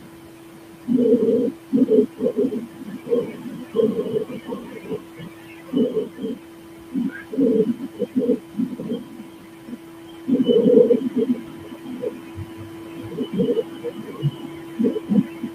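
Across the whole clip the background sinks between phrases and swells back under the speech. These are noise suppressor artifacts. The suppressor estimates the steady room noise, which sits about 15 dB below the speech, and attenuates each frequency band it judges to be noise, frame by frame. Its gain changes from frame to frame.

From the start to 0.99 s, and again from 1.17 s to the end, the speech itself sounds swallowed, with soft consonants and word endings fading. This is speech cut by the noise suppressor. The processor mistakes low-level parts of the speech for background and turns them down with it, by about 22 dB at the deepest. The opening stretch loses roughly a second of material this way, and the later stretch runs through to the end.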